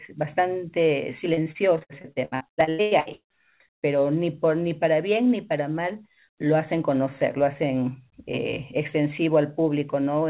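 Speech heard through a narrowband call path, with nothing above 4 kHz, which fits a G.711-style telephone codec. From 1.34 to 3.38 s it suffers repeated packet loss, producing choppy, robotic sound: a rapid series of dropouts, the longest 111 ms, each patched by extending the preceding sound before the next hole arrives. Roughly 40% of that stretch is concealment rather than received audio, giving the fragmented texture.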